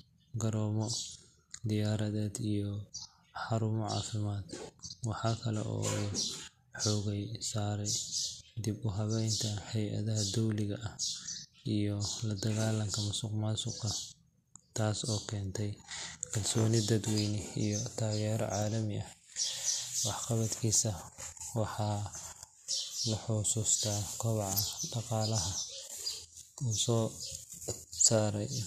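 No technical faults are audible.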